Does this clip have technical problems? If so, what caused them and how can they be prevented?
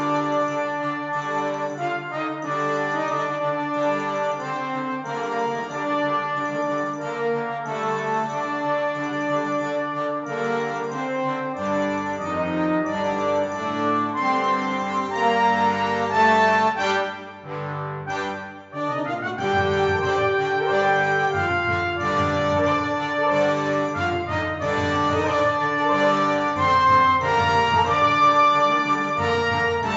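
No, there are no technical problems in this clip. Nothing needs preventing, since no fault can be heard anywhere in it.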